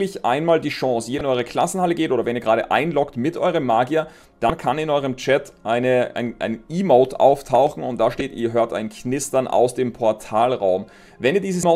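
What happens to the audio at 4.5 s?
At 4.47 to 4.50 s there is a brief glitch caused by damaged data in a compressed stream. The bytes for those frames are corrupted, so the decoder misreads them, loses frame sync and scans ahead for the next valid header before resuming.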